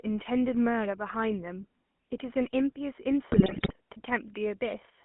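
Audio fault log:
throughout GSM full-rate codec: plainly audible buzzy, gravelly roughness, as pulse-driven vocal-tract modelling at what sounds like 13 kbps rebuilds speech within a 200 Hz to 3.4 kHz line band.
3.32–3.73 s GSM bit errors: squawks, pops and gargling as corrupted filter, pitch and gain values distort successive frames, consistent with a bit error rate near 4.6%.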